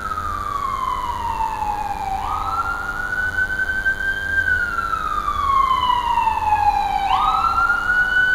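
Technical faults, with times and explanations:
Throughout, DECT cordless phone buzz. A thin, steady buzz sits well below the sound, roughly 20 dB down. It repeats 100 times a second, with many harmonics. A nearby DECT handset or base sends radio bursts every 10 ms. The audio circuit rectifies them into this buzz.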